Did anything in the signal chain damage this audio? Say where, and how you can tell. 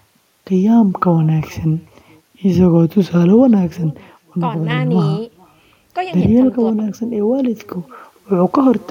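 Yes. Echo with no canceller, from call processing, runs through the whole speech clip: each phrase returns as a faint, thin copy about 400 ms later, about 29 dB down. A discrete delayed repeat after a gap, not a smooth reverberant tail, marks the far end's loudspeaker-to-microphone loop left uncancelled.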